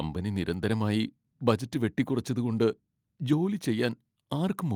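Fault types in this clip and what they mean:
No dropouts, distortion, level jumps or other technical faults can be heard anywhere in the signal.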